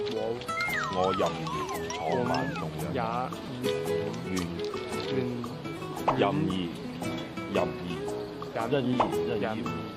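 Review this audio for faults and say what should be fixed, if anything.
A brief buzzing click at 3.46 s and a shorter click at 4.71 s are both a repeated buffer. When fresh audio failed to reach the output in time, the device replayed the last block it held: three extra plays at 3.46 s and one at 4.71 s. The repeats recur every 5 ms, which fits a 5 ms buffer and gives the first event its roughly 200 Hz buzz. Each join is hard, and nothing appears to be skipped afterwards. Enlarging the output buffer or raising the audio thread's scheduling priority would prevent these underruns.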